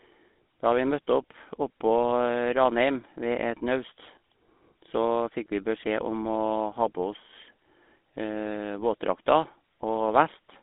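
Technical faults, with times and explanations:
Throughout, GSM full-rate codec: the speech passes through a vocal-tract model driven by sparse, regularly spaced excitation pulses at a rate that fits 13 kbps, confined to roughly 200 Hz to 3.7 kHz with nothing above 3.8 kHz, giving a plainly audible buzzy, gravelly roughness.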